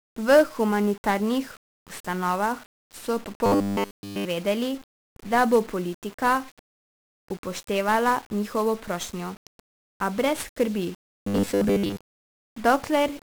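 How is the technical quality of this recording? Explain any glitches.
The technical quality is poor. The speech is heavily degraded for its whole length, with two short stretches of robotic distortion.

Throughout, the speech sounds fuzzy and crackly, with its treble buried in hiss. This is heavy 1-bit DFPWM compression. Each sample is reduced to a single up-or-down step of an adaptive level, which leaves strong broadband quantisation noise, consistent with a rate around 48 kbps.

From 3.46 to 4.25 s, and again from 11.09 to 11.96 s, the speech turns into a rigid, metallic 100 Hz buzz that still loosely tracks the speech. The likely cause is robotic sound from repeated short buffers: a roughly 10 ms slice is replayed while real audio is skipped. The first stretch is repeated throughout; the second is mostly repeated.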